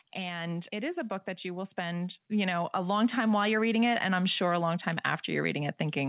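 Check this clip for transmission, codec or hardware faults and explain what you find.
One fault is audible: the level of the speech climbs steadily through almost the whole clip.

Automatic gain rising, from 0.15 s to the end at 6.09 s. The automatic gain control judged the incoming signal too quiet and kept raising its gain, lifting the speech and the background noise floor together. The result is a slow, continuous swell rather than a step, with the noise rising in lockstep with the speech. It sits on top of the call path's narrowband sound, with nothing above 4 kHz, which fits a G.711 A-law link.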